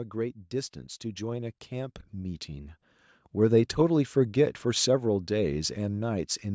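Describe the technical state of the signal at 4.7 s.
At 4.7 s the speech signal is intact, with no fault present, only the ordinary band limiting of call microphone processing, which leaves nothing above 8 kHz.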